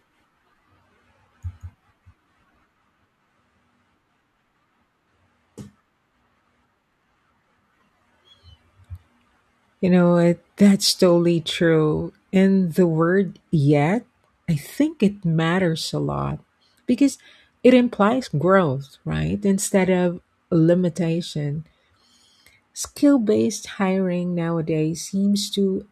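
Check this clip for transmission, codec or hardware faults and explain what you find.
Nothing stood out on listening to this speech recording.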